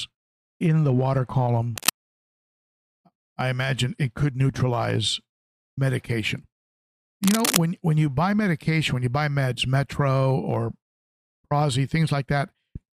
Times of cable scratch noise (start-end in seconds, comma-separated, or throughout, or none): 1.77-1.95, 7.23-7.59